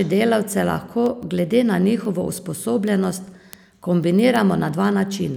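From 0.24 s to 5.35 s the speech carries word clock ticks: sharp clicks of uneven strength every 0.15 s or so, around thirty in all. The receiver's clock runs free, roughly 150 ppm off the sender's, and each slip drops or repeats one sample.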